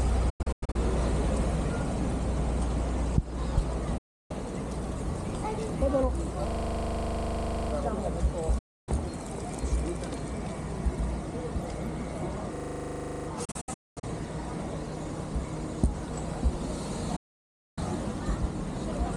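Digital broadcast dropouts at 0.30 to 0.76 s, 3.98 to 4.31 s and 8.58 to 8.89 s: the receiver stops getting valid frames and mutes with a quick 8 ms fade. The first is scattered holes, the longest 96 ms; that programme is lost. A system hang loop at 6.48 to 7.72 s repeats one 40 ms slice 31 times while the host is frozen, a steady 25 Hz buzz, returning with little programme lost. It recurs at 12.56 to 13.28 s, 18 repeats. Dropouts follow at 13.45 to 14.04 s, broken holes up to 224 ms long, and at 17.16 to 17.78 s, a solid gap of about 0.6 s.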